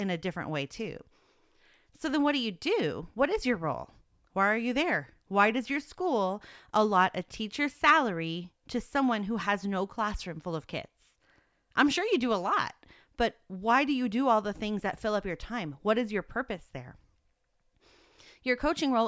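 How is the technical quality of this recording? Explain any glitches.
No glitches turn up anywhere in the recording: the signal holds steady, with no interruptions or disturbances in its technical path.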